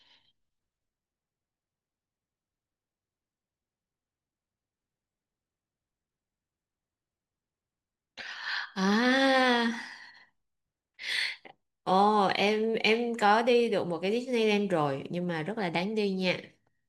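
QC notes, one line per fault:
No faults detected.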